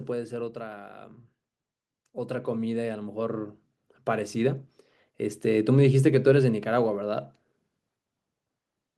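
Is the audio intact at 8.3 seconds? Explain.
Yes, the speech at 8.3 seconds plays through intact, with no dropout, click, distortion or other fault at that moment.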